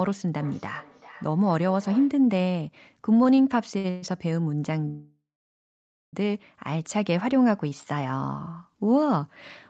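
Feedback echo between two devices runs from 0.39 to 2.23 s. A second device in the room played the call back into a microphone whose echo canceller only handles its own output, so the sound returns roughly every 0.4 s, thinner and ringing, peaking about 21 dB below the speech.

Repeated stalls (stutter) follow from 3.23 to 4.04 s. Packets arrived late, and the jitter buffer emptied five times. Each time the receiver stretched the last sound to fill the wait, the longest stretch being 122 ms. Together these add 249 ms, about 31% of that span, without losing anything, so the audio drags and stutters.

A call audio freeze lasts from 4.88 to 6.15 s. The receiver extends the last sound as a fading buzz or hiss, then holds silence for 0.93 s before resuming exactly where it stopped. That puts 1.25 s of extra delay into the audio with nothing missing. It is likely caused by packets being held up on the way until the jitter buffer ran dry.

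A jitter buffer slow-down comes at 7.69 to 7.88 s. To rebuild its reserve, the buffer repeated single pitch periods or bits of pauses, adding 45 ms. The sound plays at 81% speed with unchanged pitch, so it comes out drawn-out. Throughout, the Opus call path limits the band to 8 kHz.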